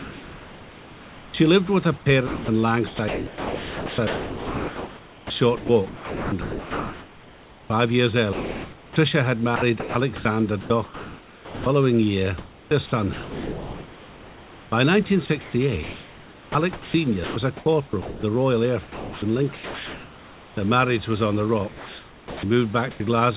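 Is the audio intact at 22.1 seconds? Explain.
No. Sound chopped by the voice detector spans 21.68 to 23.0 s, starting just after "marriage was on the". The sender's voice activity detection likely kept switching transmission on and off here, so about 840 ms of quiet speech was replaced by comfort noise. Across this stretch the speech drops out into comfort noise in places, with the real room noise sitting about 24 dB below the speech, and the passage sounds choppy and patchy.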